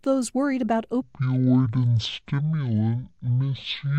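From 1.02 s, right after "those worried about", the speech drops to 0.505 times speed, a section at the wrong speed likely from a clock mismatch. It turns slow and about ten semitones deeper, and unlike a pitch shift, tempo and pitch fall together.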